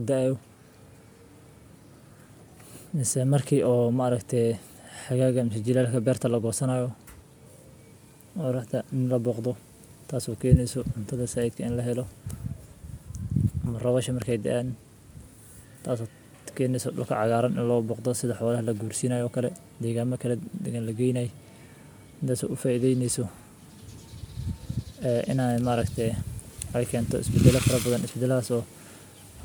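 Nothing stood out on listening to this speech recording.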